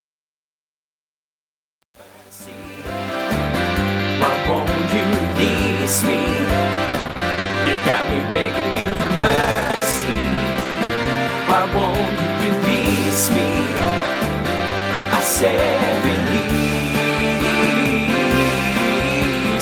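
From 0.0 to 3.38 s the fade-in shows truncation distortion: quantised to roughly 8 bits without dither, its quiet start sounds gritty up to 3.24 s. Repeated packet loss then produces choppy, robotic sound at 6.73–11.17 s, about 37% of it patched, plus 13.77–14.17 s and 14.57–15.07 s, with gaps up to 120 ms.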